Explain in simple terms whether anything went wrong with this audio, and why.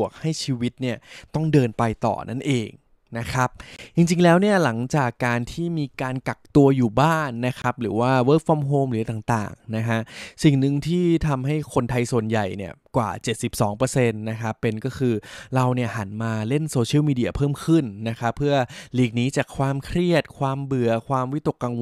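The speech cuts to silence for a split second at 3.76 s and again at 7.62 s, then carries on as if it kept playing. This is likely a Bluetooth dropout, where sound sent wirelessly to the headphones arrived too late and was skipped.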